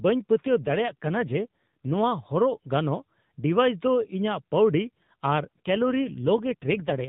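From 0.44 to 1.96 s and again from 5.56 to 7.08 s, the speech turns rougher and buzzier with no gap: an AMR rate drop, which fits the codec stepping down from 12.2 to 5.9 kbps on a weak link.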